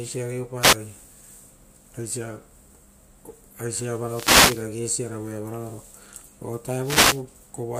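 A wireless microphone noise hit recurs three times in this speech clip: the analogue FM radio link between transmitter and receiver fades as reflected signal paths cancel, and the receiver's noise floor surges up through the audio. Each fade is heard as a swish or burst of static over the voice, at 0.59 to 0.77 s, at 4.05 to 4.69 s (the longest), and at 6.80 to 7.24 s.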